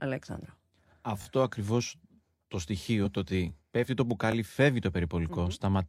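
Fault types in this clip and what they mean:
Repeated buffer: A short stutter with a hard join at each repeat. At 1.22 to 1.26 s, just before "ακριβώς το", a 20 ms piece sounds three times in a row. At 4.32 to 4.34 s, just after "το ότι πέφτει το", one repeat follows. New audio missed its deadline, so the device replayed its last 20 ms buffer. Essentially nothing is skipped; the sound is delayed rather than cut.
Damaged data in a compressed stream: A brief 30 ms disturbance at about 3.02 to 3.05 s, between "ακριβώς το" and "το ότι πέφτει το". Part of the compressed stream was wrong at this point, through lost, zeroed or overwritten bytes or mixed-in foreign data. The decoder misread or rejected the frames there and lost sync until it found the next valid frame header, which produced a chirp, squawk, click or momentary gap.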